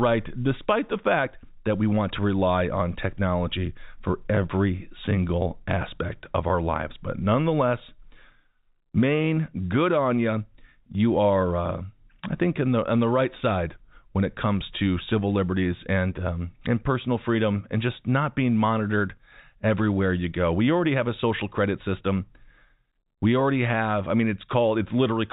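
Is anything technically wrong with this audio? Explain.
No, the speech comes through as ordinary G.711 A-law telephone audio at 64 kbps, band-limited to below 4 kHz, with nothing in the signal that points to a technical problem.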